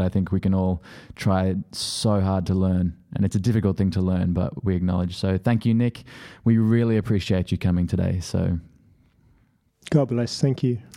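Speech recording with no audible technical faults at any point.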